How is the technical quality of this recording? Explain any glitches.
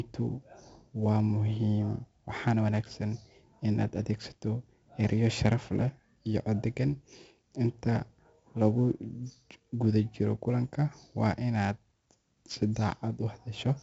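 The quality is poor: the whole recording carries heavy 4-bit ADPCM compression damage. The encoder stores each sample as a coarse 4-bit step from a predicted value, adapting its step size as the speech changes level. The error it leaves rides on the speech as a gritty hiss that swells with every loud syllable, and sharp onsets sound roughened where the step lags behind. Nothing reaches above about 7.7 kHz, which matches the 64 kbps rate and points to a 16 kHz sample rate, so the speech also sounds dull and lacks air.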